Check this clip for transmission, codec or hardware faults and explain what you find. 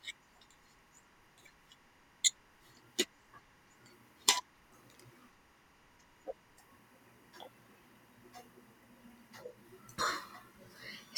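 One fault runs through the whole clip.

Timecode bleed, from start to end: linear timecode is leaking in from an adjacent track or cable. Its square wave flips between tones around 1 and 2 kHz, carrying code at 24 frames per second, heard as a steady chirping warble sitting well below the speech.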